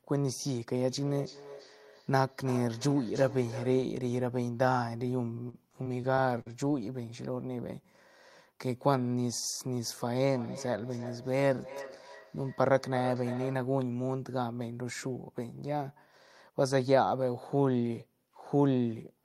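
From 0.87 to 4.03 s the speech is followed by a feedback echo between two devices. A second device in the room plays back what this microphone sent, and that playback is picked up again, beyond the reach of the local echo canceller. The copy returns at a steady spacing of roughly a third of a second, peaking at about 15 dB below the speech. It sounds thinner and more ringing than the original. That fixed spacing and ringing colour set it apart from room reverberation, which smears into a continuous tail rather than repeating.

Between 5.49 and 6.48 s there is repeated packet loss, heard as robotic sound. The pattern points to about half a dozen short holes in under a second, the longest 45 ms. Each hole was bridged by stretching the preceding sound, about 165 ms in all, which is 17% of that stretch, so the speech turns choppy. The fault is a cluster of tiny patched gaps in quick succession, not one clean silence, and that separates it from a single dropout.

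The feedback echo returns from 10.29 to 13.75 s with the same spacing of about a third of a second, now louder at about 12 dB below the speech.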